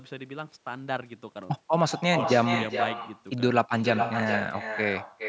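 Every phrase of this speech is trailed, about 0.4 s later, by a second copy about 7 dB quieter that sounds thinner than the original, so the speech is doubled from start to finish. That is echo with no canceller: the far end played the call through a loudspeaker, its microphone caught it, and nothing subtracted it before it travelled back. The audio itself sits within the usual call band, stopping at 8 kHz.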